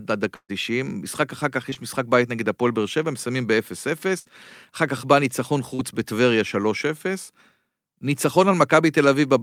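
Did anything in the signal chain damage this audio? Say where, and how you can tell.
Yes, in the network stage. A burst of packet loss hits at 0.35 to 0.51 s and again at 4.19 to 4.27 s. About 140 ms, then 60 ms, of audio never arrives. The receiver extends the last sound and fades it (133 ms, then 57 ms), and the first gap ends in 60 ms of silence before audio resumes further on.

Short concealed packet loss occurs at 1.71 to 1.74 s and 5.75 to 5.81 s, with 20 ms and 40 ms missing. These gaps are only hundredths of a second, so they come across as a brief smear or wobble rather than a held buzz, hiss or dropout. They are patched by continuing the last sound (10 ms and 39 ms) and blending back.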